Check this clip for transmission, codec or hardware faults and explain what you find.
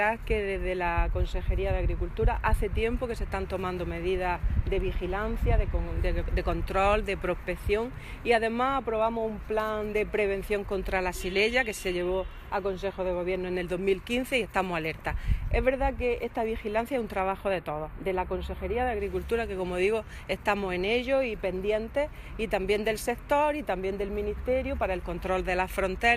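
One fault is present, a channel delay causing comb filtering, from 17.2 to 19.0 s. One channel runs late by a tiny interval, around 0.07 ms, which fits a four-sample offset. Summed to mono, shared content cancels at evenly spaced frequencies starting near 7 kHz, so the top end sounds thin and phasey.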